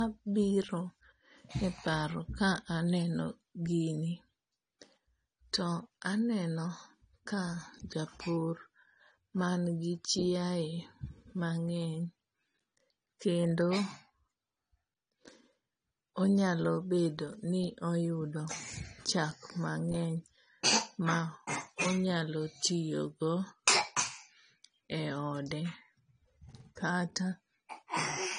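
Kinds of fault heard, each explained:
Low-bitrate audio saved at a high bitrate: the speech stops dead at 9.7 kHz throughout, with the band-limited sound of a heavily compressed source, likely a low-bitrate AAC file (fitting about 32 kbit/s) re-encoded as high-bitrate MP3, which cannot restore the removed content.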